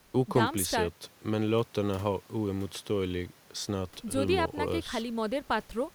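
No faults can be heard anywhere in the speech; no dropouts, clicks, distortion or timing errors occur at any point.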